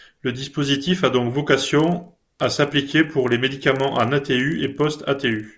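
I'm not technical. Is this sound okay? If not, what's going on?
No. From 1.8 s, just after "dispositif a donc", to the end, the resampler restarted on every block: each 40 ms chunk was converted separately, leaving small errors at the joins. The result is a steady buzz, 25 ticks per second, heard only while someone speaks.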